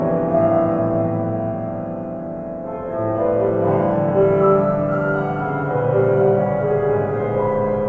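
The music signal holds steady across the whole clip, with no interruptions, level jumps, or audible processing faults anywhere along its course.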